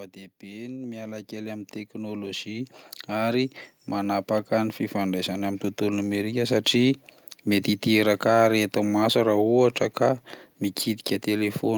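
From 0.4 s to 6.44 s the level climbs steadily by about 17 dB, a case of automatic gain rising. The gain control judged the incoming speech too quiet and kept raising its amplification over those six seconds instead of holding a fixed setting. Because the whole signal is scaled together, the background swells up alongside the voice, so the background audibly grows louder as the speech does.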